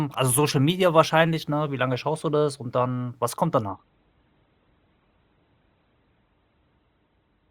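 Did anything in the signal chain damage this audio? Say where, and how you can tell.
Yes, at the network stage: the adaptive stream switched to a lower bitrate at 3.69 s, right after "dann was kommt", and stays there to the end. The connection slowed, so the player fetched a leaner encoding without stalling. The speech abruptly loses everything above 4.2 kHz and takes on a thinner edge with more codec artefacts, which fits a step down from a 64 kbit/s Opus stream to one around 12 kbit/s.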